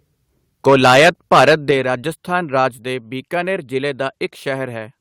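The microphone input was likely set too hot, driving peaks about 10 dB past the converter's ceiling. This microphone overload runs from 0.66 to 1.71 s, flattening the tops of roughly 7 percent of samples and giving loud syllables a harsh, crackling edge. Automatic gain control likely reacted by stepping the microphone volume down, first by 2 dB at 0.70 s, then by 6 dB at 1.71 s, where the speech and background suddenly drop in level as the distortion ends.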